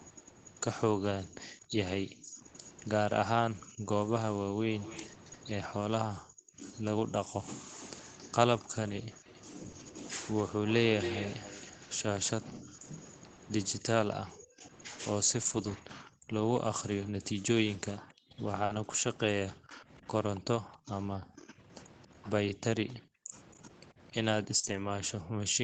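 From 1.25 s to 11.9 s there's a copy of the speech trailing about 271 ms behind it, roughly 10 dB down. That's an echo leak, likely from a loudspeaker on the far end whose echo canceller didn't fully scrub its mic. It returns more quietly, about 20 dB down, from 16.55 s to 24.44 s, at the same delay.

Overlapping the first stretch, from 1.31 s to 9.25 s, the room sound keeps dipping out, by as much as about 40 dB and for around two seconds in total. That's background gated by the echo canceller, clamping the mic while the speaker plays. It happens again from 12.52 s to 25.59 s, adding up to about five seconds of dips.

There's no gap at 2.27–2.37 s, but the sound goes rough and noisy for about 60 ms. Those are lost packets rebuilt from error correction, with the decoder playing the low-bitrate backup copies. More of these turn up at 9.63–9.69 s, 9.75–9.81 s, 15.41–15.79 s (a long 200 ms patch), 18.69–18.75 s and 24.63–24.89 s.

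Mixed in are short concealed packet losses. Each is a 20–40 ms hole the decoder filled by extending the last sound, heard as a quick smear. They fall at 9.71 s, 9.83 s, 13.35 s, 18.65 s and 24.59 s. Around 9.6–9.9 s, 18.7 s and 24.6 s these butt right up against the rebuilt packets, on top of the 8 kHz-limited Opus call sound.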